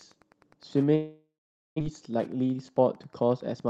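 A nearby Wi-Fi radio is being rectified by the audio circuit throughout this speech recording, producing Wi-Fi interference: a faint ticking about ten times a second, following the 102.4 ms beacon period, sitting roughly 30 dB below the speech. From 0.95 s to 1.82 s there is a long network dropout, likely from the stream stalling as its delay jumped by around a fifth of a second. The receiver stretches the last sound into a fading buzz, then falls silent for about 480 ms, and about 600 ms of audio never plays. A jitter buffer speed-up runs from 1.90 s to 3.56 s, as the receiver sheds the built-up backlog, about 200 ms in all, by cutting out short pitch-period slices. The speech plays about 12% fast at unchanged pitch and sounds hurried. The Opus call path's 12 kHz band limit removes the frequencies above 12 kHz.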